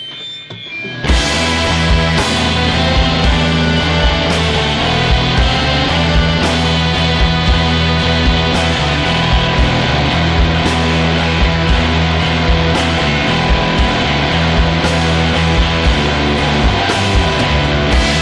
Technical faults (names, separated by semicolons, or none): none